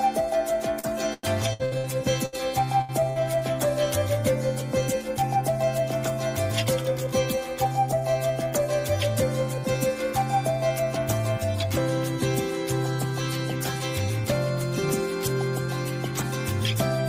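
From 0.79 to 3.25 s the sound turns choppy. This is repeated packet loss (robotic sound). Eight separate holes open in the stream, the longest 98 ms, and each one is papered over by stretching the preceding sound. The patching adds up to about 0.53 s, roughly a fifth of the stretch, and 0.3 s of audio is simply gone. Unlike a timing adjustment, this leaves audible breaks.

Three later stretches instead speed up. From 4.87 to 5.97 s the audio runs at 110% speed, with about a tenth of a second trimmed out. From 6.65 to 7.65 s it runs at 105%, with around 70 ms removed, and from 15.68 to 16.76 s at 104%, with around 50 ms removed. This is jitter buffer speed-up. Surplus queued audio is drained by cutting out pitch-period-sized slivers, so pitch holds steady. The pace just quickens.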